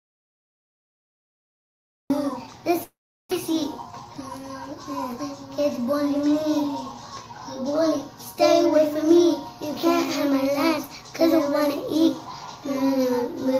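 The sound is already silent when playback starts, with no room tone at all, and cuts in mid-flow at 2.1 s. This audio dropout to silence points to the input likely being lost through a disconnected device, failed link or stray mute while the recorder kept writing silence. From 2.83 to 3.33 s the sound smears into a fading buzz, then goes silent for about 0.38 s before resuming further on, with roughly 0.4 s missing. This is a long network dropout, likely caused by no packets arriving while the receiver stretched the last sound to cover the gap, and it shifts the timing by roughly 70 ms. Between 3.90 and 4.29 s the audio sounds hurried, running at 113% speed with its pitch unchanged. This is a jitter buffer speed-up, in which the receiver cut about 50 ms in short pitch-period slices to drain excess buffered delay.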